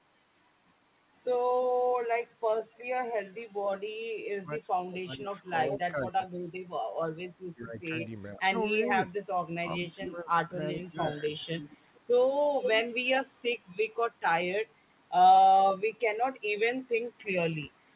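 Speech suppressed in double talk appears from 4.34 to 6.46 s and again from 7.53 to 11.4 s. The speech dips by up to about 30 dB and later about 15 dB, for roughly one and a half seconds each time. This is likely an echo canceller that couldn't tell the talker from loudspeaker echo while both sides spoke, so it turned everything down. Echo leak is heard at 5.72 to 5.79 s, 11.59 to 12.01 s and 12.63 to 12.82 s. A copy of the voice trails by 431 ms at about 10, 15 and then 5 dB below the speech. The likely cause is uncancelled loudspeaker pickup on the loudspeaker side returning in short scraps, all within a call band that stops at 4 kHz.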